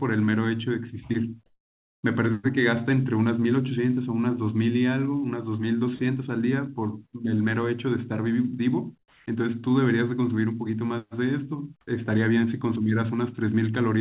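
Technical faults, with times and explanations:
8.99–9.26 s, comfort noise in place of the background: the sender likely stopped transmitting during this pause, so the receiver filled about 270 ms with synthetic noise. The real background, about 37 dB below the loudest parts, turns into a flat, featureless hiss about 4 dB quieter.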